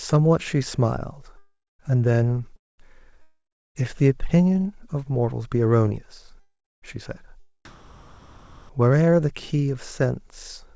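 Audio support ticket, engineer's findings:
Long network dropouts at 1.38–1.91 s, 2.56–2.80 s, 3.22–3.82 s and 6.40–6.84 s. Last sound smeared into a decaying buzz, then dead silence of 0.2–0.35 s, and speech resumes with a chunk missing. Likely packet loss with receiver concealment. Unlike comfort noise, audio is actually lost.

Comfort noise in place of the background at 7.65–8.69 s. Real background, about 31 dB below the loud parts, swapped for a flat, featureless hiss, level stepping by about 18 dB. Likely discontinuous transmission during a pause. Nothing lost and no fade to silence, unlike the dropouts.

Band-limit at 8 kHz across the clip fits a wideband call codec.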